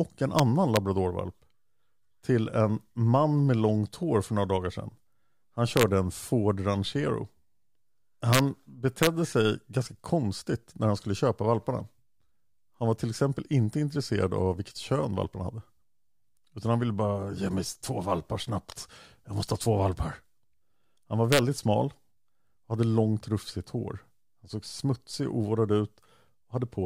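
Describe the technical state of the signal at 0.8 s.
Integer overflow hits at about 0.76 s. A loud speech peak exceeds the integer limit and wraps to the opposite sign, producing a violent crack far sharper than clipping.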